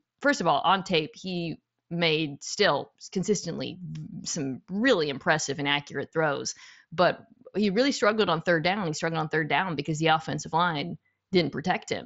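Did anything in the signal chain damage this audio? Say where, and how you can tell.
No, nothing in the chain damaged this speech. It arrives over a Bluetooth mSBC headset link, so the band stops at about 8 kHz, with a light grain on the louder syllables and faint upper detail that comes and goes, which is how that wideband codec behaves at roughly 60 kbps.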